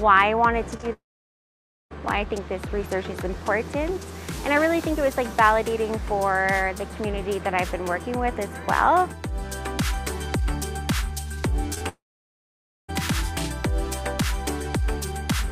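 This audio has two recurring problems, each appearing twice. The first is short concealed packet loss. At 0.77 to 0.85 s and again at 11.74 to 11.82 s, two consecutive 20 ms chunks never arrived in time. The receiver patched each gap by extending the preceding sound, so these moments come across as a brief smear or wobble rather than a clean cut. The second is a long network dropout, each following closely after one of those glitches. At 0.93 to 1.92 s and at 11.88 to 12.90 s, about one second of audio is lost. A fading continuation covers the very start. Then roughly 0.9 s of silence follows before the audio resumes further along, with the missing stretch never recovered. The likely cause is a stall in the network link that left the receiver with nothing to play.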